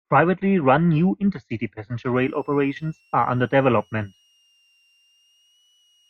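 From 2.16 s to the end of the speech, a switching supply whistle sits under the voice: a faint, thin tone of roughly 3 kHz, wandering between about 2.63 and 2.94 kHz. A nearby switch-mode supply is cycling at an audible rate, and its interference leaks into the audio path. It sits roughly 40 dB below the speech, so it is heard as a quiet high whine. On a spectrogram it shows as a narrow, slightly wavering horizontal line near 3 kHz, but it is too weak to show on the waveform.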